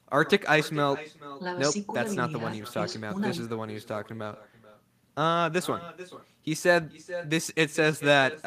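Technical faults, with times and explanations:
throughout, echo with no canceller: every phrase is trailed by a fainter, thinner copy of itself, arriving a little under half a second later and sitting about 16 dB below the direct speech. The far end is playing the call over a loudspeaker, its microphone is picking that playback up again, and with no echo canceller to strip it out, the sound returns after the full network round trip.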